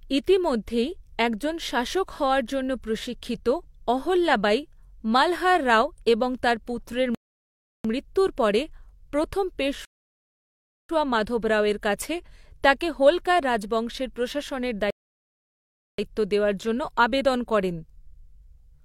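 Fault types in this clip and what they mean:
rebuffering stall: The player used up its downloaded audio and had to wait for more, so the speech falls silent three times, for 0.7, 1.0 and 1.1 s, after "রাও এবং তাঁর পুত্রের", "পুত্রের মৃত্যুর পরে প্রথম" and "তাঁকে হোলকার রাজবংশের প্রশাসনের", resuming exactly where it stopped.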